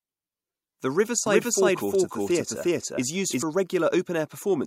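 From 1.26 to 3.42 s the speech carries a doubled audio track: a second full-band copy, roughly as loud, trails about 400 ms behind, most likely from a slower capture path mixed in. It begins and ends abruptly, with no reverberant tail. On a spectrogram every syllable pattern repeats, shifted right.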